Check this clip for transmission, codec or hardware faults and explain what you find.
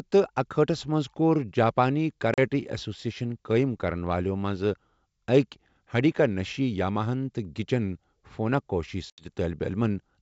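Two hard-edged dropouts interrupt the speech on this wideband G.722 link, at 2.34 s and at 9.10 s, just after "گِچِن فوناكوشی". Each is a short silent hole, 40 ms and then 80 ms long. The sound then comes back slightly distorted, and settles by about 9.3 s in the second case.

This is packet loss on an ADPCM call. About two packets, and later about four, went missing and were filled with silence. During the gap the decoder's adaptive predictor and step size drifted away from the sender's, and they took a short while to line up again, about a tenth of a second in the second case.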